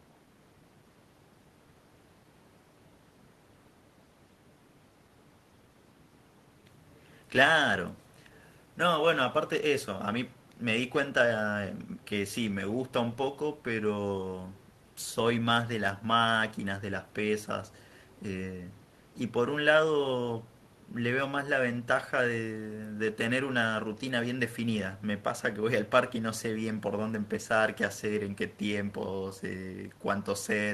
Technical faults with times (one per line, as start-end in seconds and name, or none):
none